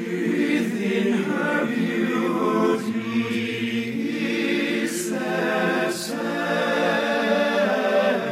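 Compressed frames skipped at 7.06 to 7.12 s: a short run of encoded frames never reaches the output, either lost from the file or rejected by the decoder as corrupt, so playback leaps forward by roughly 50 ms of audio. The sound abruptly resumes slightly further along than expected.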